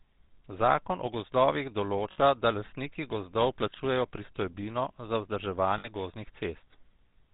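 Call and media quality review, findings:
Buzzy, gravelly roughness throughout the speech, nothing above 4 kHz. GSM full-rate codec, which fits 13 kbps: vocal-tract model driven by sparse regular pulses.

Brief rough, metallic ring at 2.12–2.19 s and 5.78–5.89 s, about 60 ms each. Lost GSM frames, which fits three 20 ms frames: last good frame repeated.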